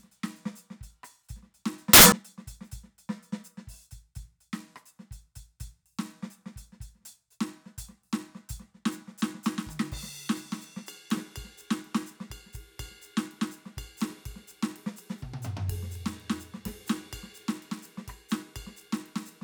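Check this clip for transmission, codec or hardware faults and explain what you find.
Samples built from the wrong bytes, from 1.93 to 2.12 s. For roughly a fifth of a second the reader assembles each sample from mismatched bytes, either shifted by one byte or with the byte order reversed. The rapidly fluctuating low-order bits end up in the most significant position, so each value swings wildly. The music is hit by a loud, harsh burst of broadband noise.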